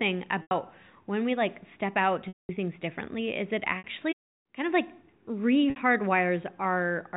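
Packet loss with pitch repetition occurs at 0.42–0.51 s before "when we like step", 2.28–2.49 s after "we like step out", 3.78–3.84 s after "things differently is it", and 5.70–5.76 s. The receiver fills each gap by repeating the last pitch period. Unlike a hard silent dropout, the short gaps come out as a briefly held buzzy tone. The 210 ms gap fades toward silence before the speech cross-fades back.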